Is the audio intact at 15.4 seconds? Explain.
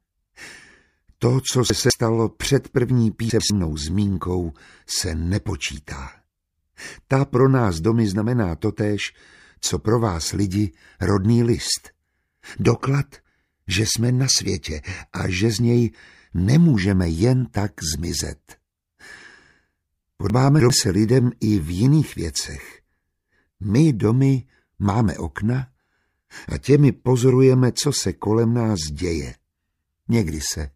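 Yes, the audio is intact at 15.4 seconds, with no dropout, click, distortion or other fault audible at that moment.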